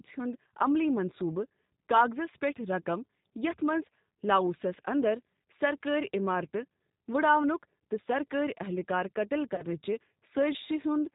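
Throughout the clip the speech carries the sound of the G.729 codec, and the plainly audible roughness fits an 8 kbit/s G.729A stream. The codec rebuilds each 10 ms frame from a vocal tract filter, a pitch predictor and a handful of pulses, so voices come out slightly buzzy and synthetic. On a spectrogram nothing appears above 4 kHz, and the harmonics look smeared and grainy rather than clean.

From 9.55 to 9.65 s, VoIP packet loss concealed by the speech codec interrupts the speech. A gap of about 30 ms, which fits three lost 10 ms frames, was filled by the decoder extending its last pitch and filter settings at falling gain. It is heard as a brief stretched sound that fades, and the speech stays weak while the decoder recovers. The waveform shows a repetitive, decaying stretch.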